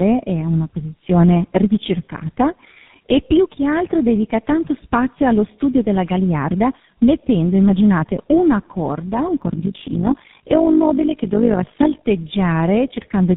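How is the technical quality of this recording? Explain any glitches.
The speech has two faults: a continuous coding degradation and a short stretch of metallic buzz near the end.

Tandem speech coding, throughout: the speech passed through G.723.1, then G.711, then GSM full rate, so it was coded twice, leaving it rough, warbly and muffled.

Overlap-add ripple, 9.42 to 12.07 s, just after "immaginate una corda un": the frames were rejoined with uneven overlap gain, so the level pulses by about 11 dB at around 50 Hz, a metallic buzz.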